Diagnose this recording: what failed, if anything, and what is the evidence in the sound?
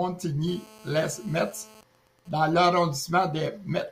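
GSM phone buzz, picked up in the analogue wiring, runs from 0.48 to 1.80 s. It is a hard, raspy buzz at 217 Hz, about 24 dB below the speech and unrelated to it. A nearby 2G phone in a call transmits 217 bursts per second, and the audio circuit rectifies them. A spectrogram shows a continuous comb of harmonics spaced 217 Hz apart.

GSM signalling bursts follow from 1.80 to 2.75 s at a lower level, roughly 30 dB down. They form even ticks with a longer 217 Hz buzz twice a second. The phone is still in the call, but its user is silent, so it sends only short groups of bursts, again rectified in the analogue path. The waveform shows clustered spiky packets separated by gaps.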